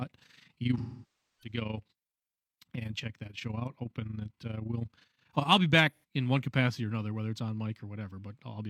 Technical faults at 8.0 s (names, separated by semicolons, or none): none